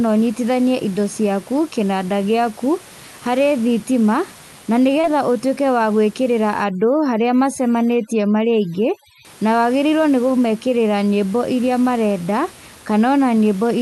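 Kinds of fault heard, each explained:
Short concealed packet loss: About 20 ms of audio near 5.01 s arrived too late, and the receiver's filled-in continuation leaves a brief smear or wobble.
Overdone noise removal: From 6.64 to 9.25 s, overly strong noise reduction lowers the background and breaks it up into twinkling specks.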